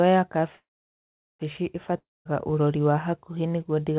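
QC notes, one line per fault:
0.56–1.41 s, call audio freeze: The speech stops and its last sound runs on briefly as a buzz that fades, leaving about 0.75 s of silence. It then picks up exactly where it broke off, with nothing missing. The likely cause is packets held up in transit, so the jitter buffer ran dry and the receiver had to fill the wait. Everything after this point arrives about 0.83 s later than it should.
1.98–2.27 s, long network dropout: The speech breaks off, the last sound trails away as a fading hiss, and about 0.21 s of silence follows before the audio resumes at "ũrori wa hakuhĩ nĩguo". Unlike the freeze, this does not simply wait. About 0.28 s of speech never comes back, because the audio that should have filled the gap was likely lost on the network. The narrow call band, with nothing above 4 kHz, carries through both breaks.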